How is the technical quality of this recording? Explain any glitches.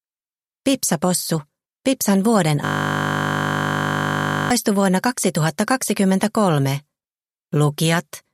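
The recording has one clear glitch. From 2.65 to 4.51 s, a system hang loop takes over. The machine or its driver froze while the audio hardware kept replaying its ring buffer. A 20 ms piece repeats exactly, over and over. That short loop sounds like a steady 50 Hz buzz, which points to a small buffer.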